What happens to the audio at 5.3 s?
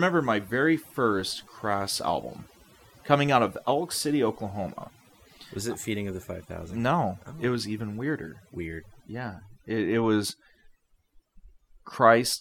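At 5.3 s the speech carries the overdone noise removal present across the whole clip. An over-aggressive noise reducer pulls frequency bands near its noise estimate far down, taking quiet speech detail with them, so the background drops and breaks up into twinkling specks.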